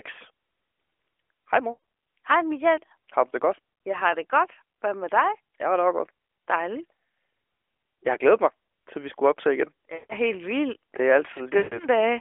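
At 1.72–1.79 s, 9.94–10.15 s (between "vi skulle optage igen" and "helt vildt") and 11.58–11.78 s, lost AMR speech frames occur. The decoder stretches the last pitch and spectral shape while fading, so the speech smears into a fading drone. On a spectrogram, frozen harmonics dim to blank. In the waveform, the envelope tapers to near silence.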